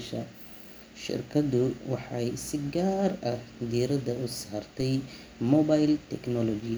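A DC step occurs at 4.80 s in this speech, just after "gaar ah diiradda u". The waveform's zero line suddenly jumps to an offset of about -30 dBFS, the kind of shift left when a converter recalibrates or an offset input is switched in. The jump is heard as a brief low thump. The offset then drains away as though through a 20 Hz high-pass, while the speech carries on unchanged.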